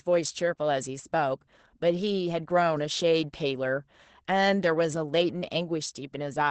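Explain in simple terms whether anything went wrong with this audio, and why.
Something did go wrong: the whole recording, from the first second to the last, carries Opus voice compression damage. The speech was squeezed through a low-rate voice codec that keeps sound only up to about 8 kHz and describes the voice coarsely. That is why it sounds dull, slightly hoarse and a little robotic throughout, with a plainly audible rough, processed texture.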